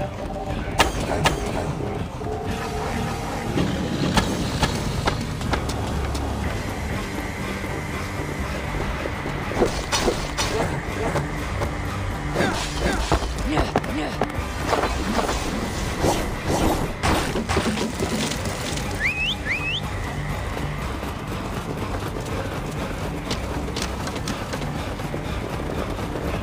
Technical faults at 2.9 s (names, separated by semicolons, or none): doubled audio track